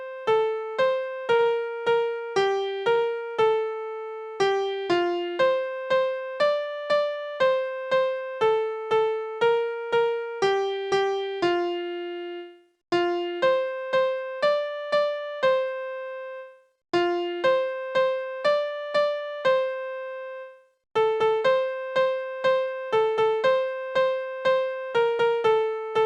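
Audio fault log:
0.39–1.47 s: scattered short gaps. About four packets arrived too late or not at all. The receiver bridged each hole by extending the preceding sound, roughly 70 ms in total, with the longest around 40 ms. That leaves brief ticks and smears across this stretch.
2.95–2.99 s: short stall from a late packet. The jitter buffer ran dry, so the receiver held the current sound for 21 ms until the packet arrived, then resumed where it had stopped. Nothing is lost, but playback now runs 21 ms later.
21.41–22.74 s: jitter buffer speed-up. With excess audio queued, the receiver trimmed short pitch-period-length pieces, roughly 40 ms altogether. Playback runs at 102% speed with unchanged pitch, so this passage runs slightly fast while the buffer drains back toward its target delay.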